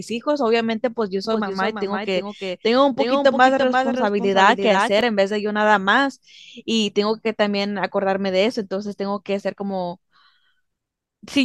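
From 1.25 to 5.01 s, a doubled audio track. Speech repeats about 0.3 s late, about 5 dB quieter. Likely a slower second path.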